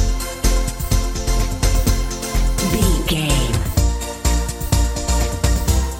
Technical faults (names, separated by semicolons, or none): none